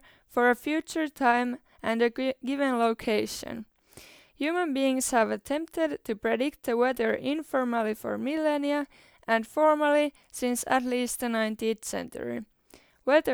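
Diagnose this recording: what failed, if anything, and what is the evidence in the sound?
Nothing failed in this recording; the sound shows no evidence of a fault at any stage.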